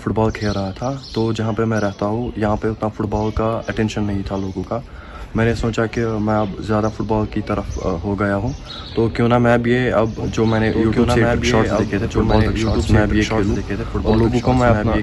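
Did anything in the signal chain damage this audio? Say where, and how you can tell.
Yes. A doubled audio track begins abruptly at 10.18 s and runs to the end: a second full-band copy of the sound sits about two seconds behind the original, roughly 5 dB quieter, with no decay or room colour. On a spectrogram, every pattern reappears intact, shifted right by about two seconds. The waveform shows a sudden jump in density at 10.18 s. The likely cause is a slower duplicate capture path or an editing step that stacked two out-of-step copies.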